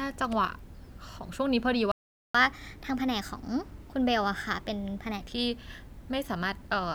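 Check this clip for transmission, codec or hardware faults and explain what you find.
Two related playback faults show up here, a stall followed by a stretch of sped-up catch-up, both on the playback side rather than in the codec.

Playback stall, 1.92 to 2.35 s: the speech just cuts to silence for about 0.43 s mid-flow, then resumes. The likely cause is the player running dry of buffered data, or its audio thread getting blocked, so nothing reached the output until it recovered. It's a clean gap, not a crackle or a dropout burst.

Catch-up at higher speed, 2.35 to 5.21 s: once playback restarts, the player burns through its backlog by resampling at 1.15x. Because resampling changes speed and pitch together, the speech sounds rushed and lifted by about two semitones, a slightly chipmunky tilt. Around 5.21 s it settles back to normal rate and pitch, having recovered the lost time.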